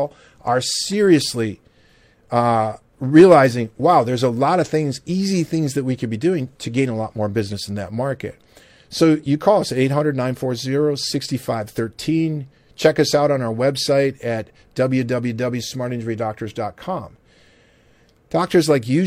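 A speech recording, with nothing technically wrong to point to anywhere in it. No fault shows up at any point, so there are no times or causes to give.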